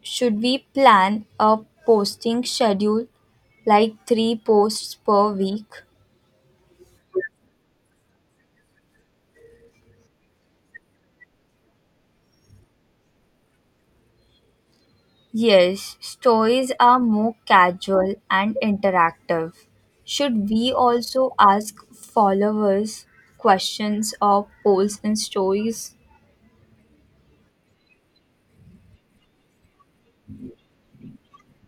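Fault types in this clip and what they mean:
Processor overload crackle: the processor repeatedly missed deadlines on buffers of about 5 ms and skipped them, leaving gaps that make the speech crackle and tear from 13.60 to 13.97 s.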